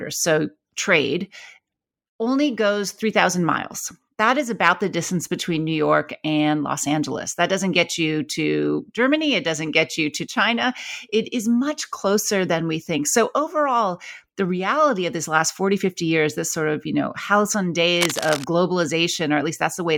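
From 17.95 to 18.45 s, just after "of you know halcyon", cable scratch noise rustles over the speech, only slightly quieter. Likely a worn connector shifting, it shows as dense, ragged broadband spikes.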